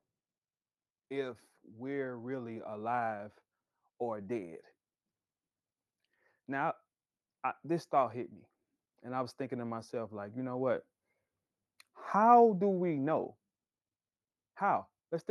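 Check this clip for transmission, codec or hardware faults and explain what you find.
No transmission, codec or hardware faults turn up in this speech recording, which shows the steady coding character and top end of a call path working as intended, with content reaching up to about 12 kHz, consistent with an Opus link at around 32 kbps.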